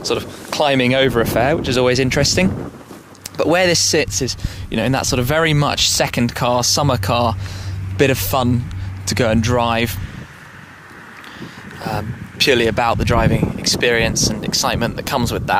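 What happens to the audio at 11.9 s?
Nothing goes wrong at 11.9 s; the audio plays through that moment intact, with no dropout, click or other fault.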